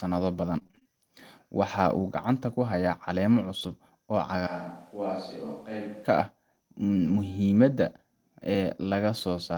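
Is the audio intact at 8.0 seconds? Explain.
Yes, at 8.0 seconds the audio is intact, with no dropout, glitch or other technical fault at that moment.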